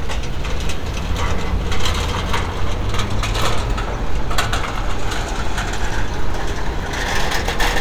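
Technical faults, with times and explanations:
Nothing stood out on listening to this recording of sounds.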